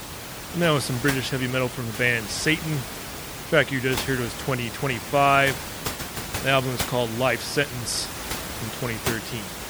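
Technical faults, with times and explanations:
throughout MP3 compression: plainly audible watery swirl and metallic chirping on s sounds, likely from encoding near 64 kbps. Weak frequency lines flicker between frames, unlike a plain low-pass filter's steady dullness, while the room noise stays about 10 dB under the speech.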